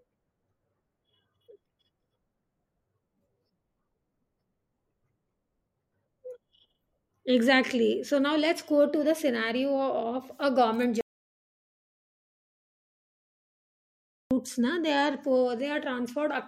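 A speech clip with one clear problem: an audio dropout to silence from 11.01 s to 14.31 s, so roughly 3.3 seconds simply vanish. The talking cuts off abruptly, the gap is dead silence with no room tone underneath, and then the sound snaps back in mid-flow. That silence points to the input going away, likely a lost connection or a brief mute, while the recorder kept writing empty samples, so whatever was said there is gone.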